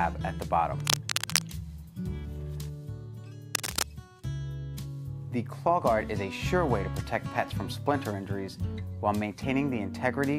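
From 0.80 to 1.42 s and again from 3.55 to 3.83 s there's cable scratch noise, rough, crackly bursts about as loud as the sound itself, likely a worn connector being moved.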